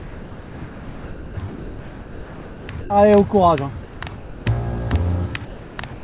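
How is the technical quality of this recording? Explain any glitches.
The recording is repeatedly interrupted. The sound gives way to steady, featureless hiss at 0.00 to 1.37 s, 1.49 to 2.69 s, 2.81 to 2.90 s, 3.83 to 4.01 s, 4.16 to 4.46 s, 5.45 to 5.78 s and 5.93 to 6.04 s, losing up to about 1.25 s of audio at a time. This is likely sound dropped by the voice detector. The sender judged those stretches to be background and stopped transmitting, and the receiver filled each gap with comfort noise until transmission resumed. The band is also cut off around 4 kHz, which fits a narrowband call codec such as G.711.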